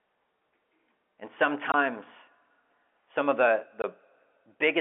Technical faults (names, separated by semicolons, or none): packet loss filled with silence